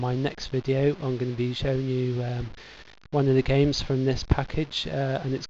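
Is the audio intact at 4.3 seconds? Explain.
Yes, the audio is intact at 4.3 seconds, with no dropout, click, distortion or other fault audible at that point.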